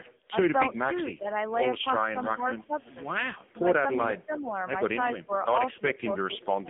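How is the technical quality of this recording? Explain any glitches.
The technical quality is poor: the speech has been through a low-rate mobile codec for its whole length, and a speakerphone echo canceller misbehaves several times.

AMR narrowband mobile codec: Throughout, the speech sits in a 200 Hz to 3.5 kHz telephone band, with nothing above 3.7 kHz. At 6.7 kbps the vocal-tract model gets few pulses per subframe, so the voice sounds buzzy and synthetic. This is heavy coding damage rather than simple low-pass filtering.

Echo leak: From 0.04 to 1.51 s, 2.23 to 2.94 s and 3.47 to 3.51 s, a faint copy of the speech trails it by 326 ms. It is about 25, 20 and 40 dB below the speech. This is likely residual loudspeaker pickup that the canceller failed to remove. The fixed delay distinguishes it from room reverberation, which would smear the sound instead of repeating it.

Speech suppressed in double talk: At 0.94 to 1.27 s, 1.97 to 2.71 s and 5.18 to 6.69 s, the voice dips by around 10 to 15 dB, over about 150, 400 and 500 ms in total. 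The likely cause is the canceller turning down the talker while both sides spoke.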